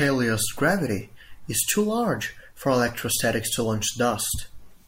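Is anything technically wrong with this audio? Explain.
No, nothing is technically wrong with this audio. There is no fault to point to anywhere in the clip.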